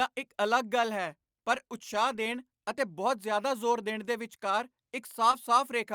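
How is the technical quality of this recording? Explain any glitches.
One glitch stands out, near the end of the speech. Short concealed packet loss at 5.31–5.35 s: about 20 ms never arrived, so the receiver extended the preceding sound before blending back, leaving a brief smear.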